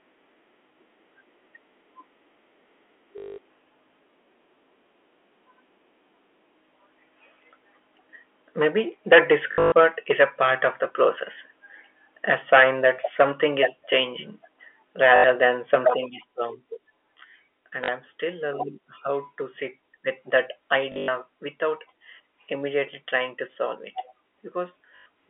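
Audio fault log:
3.18–3.38, 9.52–9.72, 15.16–15.24, 17.84, 20.92–21.08 and 24.96–25.06 s: packet loss with last packet repeated. The gaps run 200, 180, 80, 40, 140 and 100 ms, with the 9.52 and 20.92 s losses scattered in runs of up to 120 and 100 ms. The lost spans fit 20 ms packets, so each gap is filled by replaying the last packet, giving a 50 Hz robotic buzz. A dropout would go silent instead.
8.58–11.05, 12.29–13.65 and 15.02–15.78 s: microphone overload. The loudest syllables take on a harsh, crackling edge. Peaks push roughly 11 dB past the converter's limit in the first two spans and about 8 dB in the third, and a few percent of samples are flattened. The likely cause is input volume set too high at the microphone. The crackle follows the speech peaks. A concealment buzz would hold a steady repeating tone.
8.62, 12.34 and 15.90 s: microphone volume stepped down. Voice and background both drop at once, by about 2 dB at the first two points and about 7 dB at the third, each shortly after clipped peaks. 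This is likely the call software cutting the device's input volume in one step after detecting overload. A single clean step in level that then holds separates it from a compressor, which would pump and recover.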